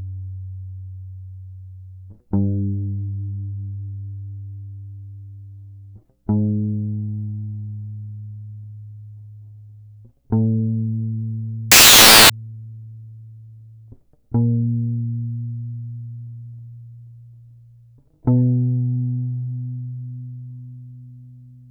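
Samples built from the wrong bytes, 11.72 to 12.30 s: misassembled bytes turn the fast-changing low bits into the main value, so the music becomes loud, harsh broadband noise.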